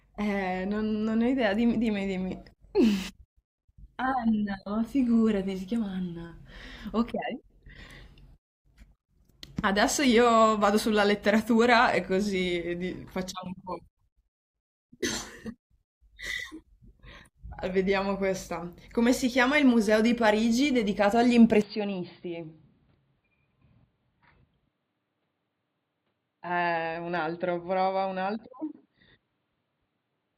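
Speech recording. At 21.62 s the sound abruptly turns dull and boxy, with no gap at the change, and stays that way to the end. Nothing remains above 4.7 kHz. The level drops about 10 dB. A faint new noise floor appears, roughly 45 dB down. Likely cause: the input switched to a poorer device.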